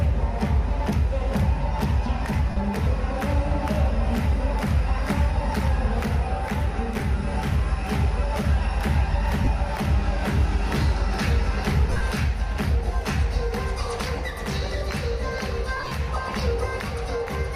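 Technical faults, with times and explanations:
2.50–2.57 s, 9.45–9.47 s, 11.90–12.01 s and 15.76–15.92 s, lost LE Audio frames. The gaps last 60 ms, about 23 ms, 90 ms and 113 ms, which fits 7.5 ms LC3 frames. The last two are scattered, with the longest run around 40 ms. The decoder fills each hole by repeating the last spectrum with random phase signs. Tonal content turns into a brief noisy smear. Longer runs fade toward silence before the sound returns.
6.96–7.00 s, chunks out of order. One 20 ms chunk arrives one chunk late and plays after the chunk that should follow it. No audio is missing, but the order is wrong. The swap creates hard joins where the waveform jumps. These are heard as a short jumbled moment.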